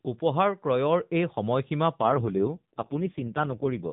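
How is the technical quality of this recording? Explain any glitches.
The speech comes through a narrowband AMR mobile path, with nothing above 4 kHz and light codec coarseness, and its quality drops partway through. An AMR rate drop starts at 2.02 s and lasts to the end. The network cut the codec's bitrate to protect a weak link, which fits a step from 12.2 to 4.75 kbps. The bandwidth stays the same with no gap, but the voice turns rougher, buzzier and more synthetic.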